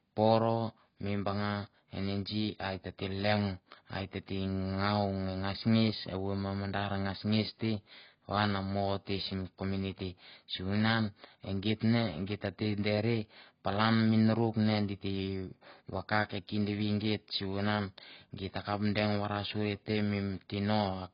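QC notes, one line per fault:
Throughout: AAC compression, heavy. Nothing is heard above 5.2 kHz, and the speech sounds dull and smeared, with a warbling, fizzy edge on sibilants. This points to AAC-LC at a low rate, likely around 16 kbps, starving bands and lowering the cut-off.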